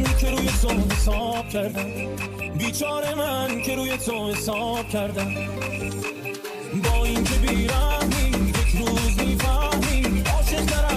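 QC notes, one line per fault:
2.89–9.29 s, low bit depth with dither: for this stretch the signal is held to only 8 bits, and dither is added before each sample is rounded to the coarse steps. Instead of tracking the signal and turning into grainy distortion, the rounding error is spread out as random white noise. The result is a constant, even hiss that sits roughly 30 dB under the signal, starting and stopping abruptly at the section's edges.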